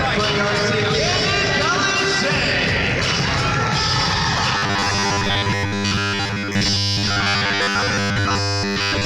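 From 4.55 s to 9.05 s the sound turns into a rigid, metallic buzz pitched at 100 Hz, loosely following the underlying audio. This is robotic sound from repeated short buffers, likely caused by audio arriving too seldom, so a 10 ms slice is repeated over most of the passage.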